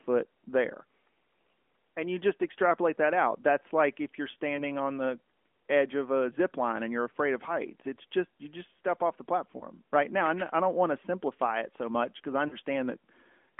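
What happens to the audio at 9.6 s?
A lost AMR speech frame from 9.58 to 9.61 s: the decoder repeats the previous pitch and vocal tract settings at reduced gain, producing a brief dip or warble consistent with one missing 20 ms frame.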